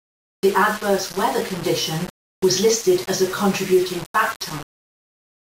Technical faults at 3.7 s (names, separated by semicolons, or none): low bit depth without dither